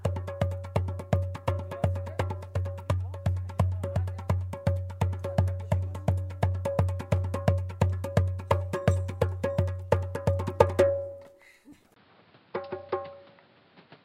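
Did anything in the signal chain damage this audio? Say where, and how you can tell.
Yes. At 11.94 s a 20 ms gap is followed by audio with nothing above 5.3 kHz through to the end, plus a faint new noise floor and no level jump. This is likely an input switched to a poorer device at the driver stage. A codec bandwidth drop would not bring its own noise.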